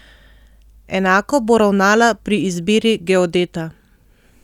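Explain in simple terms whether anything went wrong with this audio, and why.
Nothing went wrong with this audio, because no fault can be heard anywhere in the recording.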